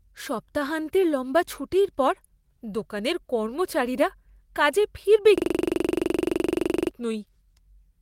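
Speech throughout, with clock drift between sender and receiver: the sender's clock runs roughly 2% slow, so the receiver's buffer keeps draining rather than overflowing. That drift drives repeated timing corrections from 0.10 s to 8.00 s. Small pieces are repeated, all in the same direction, adding roughly 200 ms overall. This is heard as slight, unevenly spaced hiccups, unlike a hang loop's exact repetition. From 5.38 s to 6.91 s a system hang loop takes over. A single 42.67 ms slice, which fits a 2048-sample ring buffer, repeats 36 times at 23.4 Hz, giving a rapid machine-gun stutter in place of about one and a half seconds of speech.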